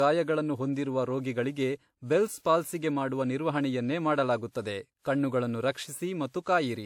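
Throughout, the speech sounds swirly, smeared and hollow, with nothing above 19.4 kHz. Generation loss is likely, from about three passes through a WMA codec near 96 kbit/s.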